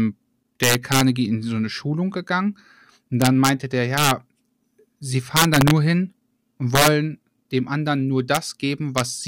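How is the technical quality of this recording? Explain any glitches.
The speech is marred by integer overflow on loud peaks at 0.63–1.01 s (just before "in so eine"), 3.22–3.49 s, 3.98–4.11 s, 5.37–5.71 s (before "hin und"), 6.75–6.88 s, 8.35–8.37 s (after "dem anderen nur") and 8.98–9.00 s. The level was pushed about 1 to 6 dB past the integer ceiling without limiting, so those peaks wrapped around to the opposite extreme. Each one is a harsh crack, far sharper than clipping. On a waveform, peaks jump from full positive to full negative instead of flattening. On a spectrogram, bright broadband vertical streaks appear.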